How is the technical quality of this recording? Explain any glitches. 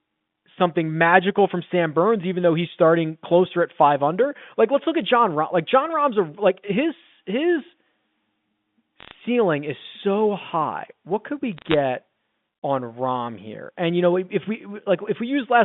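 The recording has two kinds of fault on a telephone line whose band runs from about 150 Hz to 3.6 kHz: short bursts of digital crackle and a few seconds of rough, metallic coloration.

Bit errors on a digital phone line occur from 9.00 to 9.12 s and again from 11.57 to 11.74 s. On this G.711 mu-law line, flipped bits each corrupt a single sample, at a rate of a few tenths of a percent. Hits on the sign or high-order bits produce sharp ticks, heard as a short crackle over the speech.

Periodic clock jitter runs from 10.26 to 13.77 s. The converter's sample clock wobbles at around 100 Hz, so every component of the speech gains sidebands about 100 Hz above and below it, strongest at higher frequencies. The result is a rough, metallic edge that disappears in the pauses.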